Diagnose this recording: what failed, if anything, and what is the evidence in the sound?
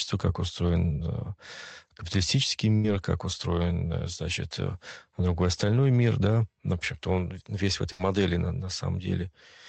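Burst of packet loss at 2.75–2.87 s and 7.92–8.02 s, a network-stage fault. In each gap the receiver's concealment extends the last sound for 84 ms and then 72 ms, dimming it as it goes, before playback jumps ahead. About 80 ms of speech never arrives. The first gap sits just before "как устроен значит другой", the second just after "весь в". The surrounding band-limited call coding fits Opus near 24 kbps.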